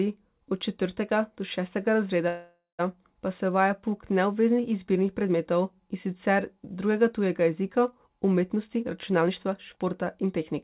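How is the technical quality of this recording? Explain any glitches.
The recording is narrowband call audio with nothing above 4 kHz, which fits a G.711 telephone codec. Two glitches stand out.

Call audio freeze, 2.28 to 2.81 s, just before "pa se uvaja": the likely cause is delayed packets draining the jitter buffer. The receiver stretched the last sound into a fading buzz for about half a second, ending in roughly 120 ms of silence. Then the speech resumed intact, only later.

Jitter buffer speed-up, 8.54 to 10.54 s: after the earlier delay, the buffer held excess audio. To catch up, the receiver repeatedly cut out pitch-period-sized slivers, removing around 0.3 s in total. The speech runs at 116% speed with unchanged pitch and sounds hurried.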